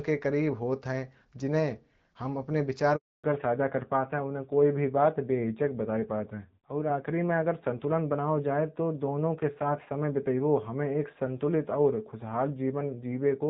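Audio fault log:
2.96–3.24 s, handover gap: the sound fades out within a few tens of milliseconds and then drops to silence for 280 ms before resuming. The call was being passed from one network to another, and no speech frames arrived while the link switched, so anything said in that window is simply missing. On a waveform this is a flat line after a brief taper; on a spectrogram it is a clean vertical band of darkness across all frequencies.
3.24 s to the end, fallback to narrowband: once the call resumes, everything above 4 kHz is gone and the speech sounds duller, boxier and rougher than before. The link came back on an older narrowband codec, which fits a step down from AMR-WB at 12.65 kbit/s to AMR-NB at around 7.4 kbit/s. Before the gap the light HD Voice coding carries energy up to about 7 kHz. On a spectrogram, the upper band disappears abruptly at the gap, leaving a hard ceiling at 4 kHz for the rest of the clip.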